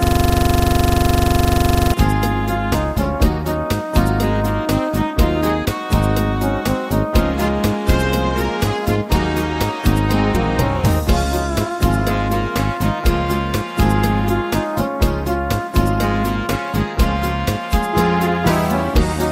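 From the first instant until 1.94 s, a system hang loop is already under way. The machine has frozen while the audio hardware keeps replaying one 42.67 ms slice, which fits a 2048-sample ring buffer. That slice repeats 44 times at 23.4 Hz, giving a rough, rattling buzz. Unlike underrun dropouts, there are no silent gaps and no fresh material creeping in; every cycle is an identical copy.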